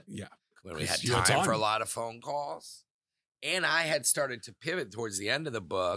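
No technical faults occur at any point in the recording, so there is nothing to place in time order.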